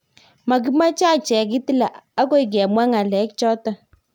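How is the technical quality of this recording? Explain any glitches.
Nothing in the speech recording stood out as a technical problem on listening.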